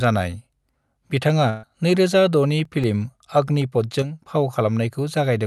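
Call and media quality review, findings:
Burst of packet loss, 1.49 to 1.65 s. About 140 ms of speech missing. Receiver concealment filled roughly 135 ms by extending the last sound and fading it, heard as a held buzz or hiss. Speech resumes further on, with the missing stretch skipped. Network or jitter-buffer side.

CD scratch ticks, 2.47 to 3.38 s. Six short ticks, about six to seven per second, each a few milliseconds at most. Rhythm matches one disc rotation per tick. A surface blemish exceeds error correction, and the player interpolates or mutes the damaged samples. Source-media fault, upstream of the call.

Drop of about 6 dB, 4.02 to 4.27 s. Level falls abruptly, then recovers. Likely cause: one channel drops out, so after the mono sum the shared content loses half its level. Capture or stereo routing stage. The Opus call path limits the band to 12 kHz throughout.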